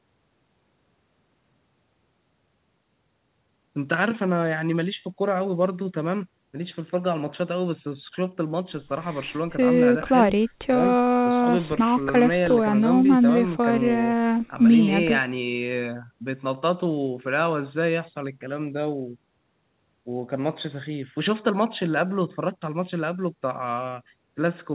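Speech over a normal call path with no technical faults: nothing above 4 kHz, which fits a narrowband telephone codec such as G.711 mu-law, and the lowest bass trimmed by the call's microphone processing as expected.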